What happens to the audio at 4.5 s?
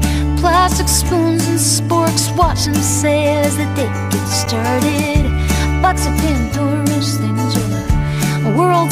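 A gap at a join of encoded pieces at 4.46 s: separately encoded segments were spliced untrimmed, leaving a gap of about 12.5 ms with smeared edges before the sound resumes.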